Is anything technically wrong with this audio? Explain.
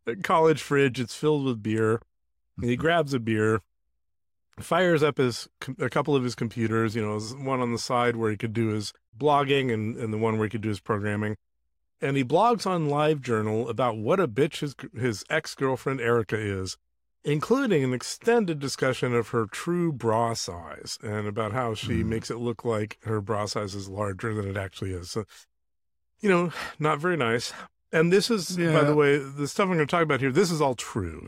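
No, the speech signal holds steady with nothing technically amiss at any point.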